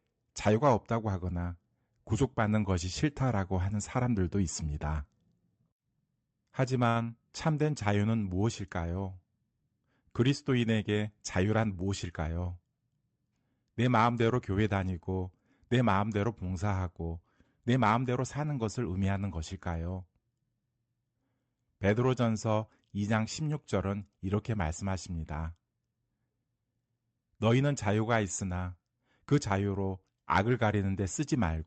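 At 6.89 s, a burst of packet loss interrupts the speech until 6.97 s. About 60 ms of audio never arrived in time, so the receiver held the last sound it had and faded it out. That stretch sounds like a short frozen smear, and then the speech jumps ahead with about 60 ms skipped. On a spectrogram the frequency content freezes into flat, dimming bands and ends with an abrupt discontinuity. The waveform shows a repetitive, shrinking segment. Like the rest of the spectrum, it stops near 8 kHz because of the Opus call path.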